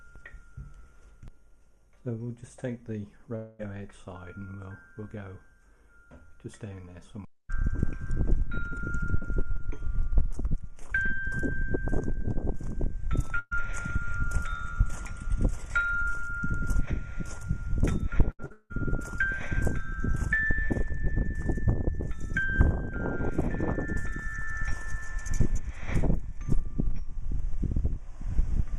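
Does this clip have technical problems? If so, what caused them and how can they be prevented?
Yes. From 3.35 to 3.61 s, about 240 ms of audio is missing. The last sound is stretched into a fading buzz or hiss, then the audio resumes further on. The likely cause is a long network dropout. A steadier connection, such as wired rather than Wi-Fi, prevents this.

At 13.39 to 13.53 s, a burst of packet loss removes about 120 ms. The receiver holds the last sound and turns it down, ending in a brief silence of about 30 ms. Forward error correction or a slightly deeper jitter buffer would cover such bursts.

From 18.31 to 18.72 s, repeated packet loss gives a choppy, robotic sound. Four gaps fall in quick succession, the longest about 177 ms. About three quarters of that stretch is patched-over sound rather than real audio. Reducing network congestion, or enabling redundancy, prevents this.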